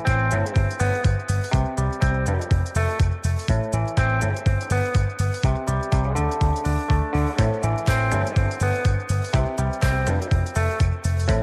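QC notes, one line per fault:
No faults found.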